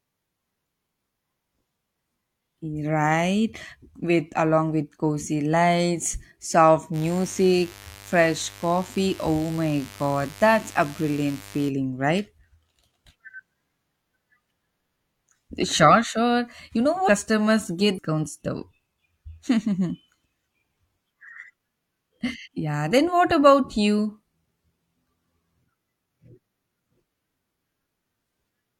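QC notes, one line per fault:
6.92–11.72 s, mains buzz: right after "with cozy lights soft" a raspy 50 Hz buzz sits roughly 20 dB under the speech. Sharp switching spikes twice per mains cycle spray harmonics up into the kHz range, which gives it that edgy, rather than humming, character.
17.05–17.09 s, 17.94–17.99 s, 22.42–22.48 s, compressed frames skipped: the audio jumps forward three times, by roughly 0.7 s, 0.7 s and 0.2 s. Whole 42.7 ms frames go missing.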